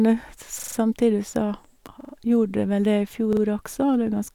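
From 0.60 to 0.77 s, right before "så gjorde det vel", there's a repeated buffer: new audio arrived late, so a 43 ms chunk, fitting a 2048-sample buffer, replays with hard joins, a quick stutter. Again at 2.01–2.13 s before "gjorde det vel", and 3.33–3.41 s.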